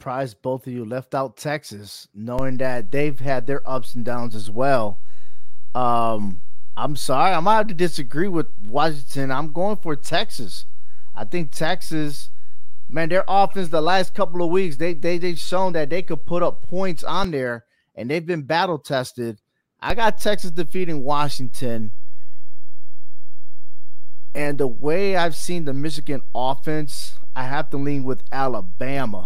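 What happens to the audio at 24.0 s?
At 24.0 s the audio sits inside a DC step that begins at 19.90 s, just after "they've been battle tested", and holds to the end of the clip. The waveform's zero line jumps by about -13 dBFS, as when an offset input is switched in or a converter recalibrates. The jump is heard as a low thump or click at onset while the speech carries on unchanged, unlike hum, which adds a continuous tone.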